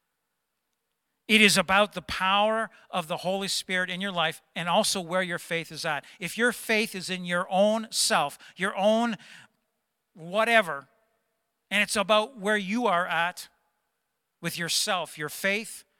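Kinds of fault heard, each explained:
Nothing here stands out as a technical fault; the speech comes through steady and whole, with no dropouts, glitches or odd noises to point to.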